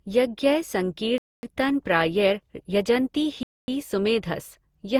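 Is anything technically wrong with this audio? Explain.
Yes, there are two problems. Throughout the speech, the audio has likely been through generation loss: it was decoded and re-encoded with a lossy codec around seven times, which fits an Opus chain at roughly 64 kbit/s. Each pass requantises the signal on a shifted frame grid, so noise and spectral gaps pile up instead of staying fixed. The result sounds swirly, smeared and hollow, with consonant attacks softened, although content still reaches up to about 20.2 kHz.

There is also a gap between chunks at 1.18 to 1.43 s and again at 3.43 to 3.68 s. The stream appears to be delivered in 2-second chunks, and a 250 ms stretch of silence is inserted at each join, as from codec padding or a player starting each piece late. No speech is lost. It is pushed later, so the flow halts abruptly in two clean-edged holes spaced evenly apart.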